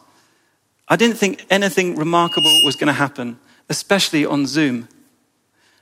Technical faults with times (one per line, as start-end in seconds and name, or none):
2.18-2.88 loudspeaker feedback squeal